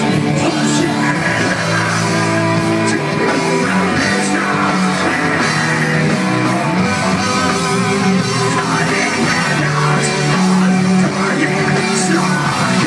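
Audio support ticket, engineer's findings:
No audible faults found: continuous signal, no dropouts, discontinuities, level anomalies or spectral defects detected on listening.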